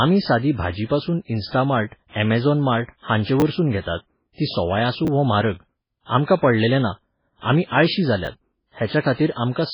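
Running through the whole clip, the speech has most likely been squeezed through MP3 compression at a very low bitrate; the heavy damage points to something around 16 kbps. Starved of bits, the encoder discards everything above 5.3 kHz and keeps dropping weaker frequency lines in and out between frames, so the speech sounds muffled, watery and swirly, with metallic chirping on sibilants and smeared consonant onsets.

At 1.48 to 1.53 s a pre-echo appears. A sharp attack sat late within a transform block, and the quantisation noise budgeted for that loud moment was spread across the whole block, including the quiet stretch before it. The result is a short hiss leading the attack by about 41 ms, and the onset itself lands softened and blurred rather than crisp.

Three times, chunks play out of order: a short piece of audio, about 10 ms long, was delivered or written late and lands after material that should have followed it. 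At 3.40 to 3.42 s, just after "अमॅझोन मार्ट", and at 8.25 to 8.27 s, after "पडलेलें ना आमी आळशी", the displacement sounds like a one-chunk slip. At 5.05 to 5.08 s, after "तीं सोवाय आसूं", it sounds like a slip of about two chunks. Nothing is lost, but each reshuffle leaves hard joins, heard as a brief jumbled stutter.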